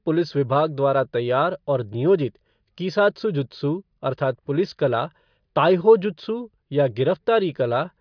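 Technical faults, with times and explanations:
No technical faults are audible.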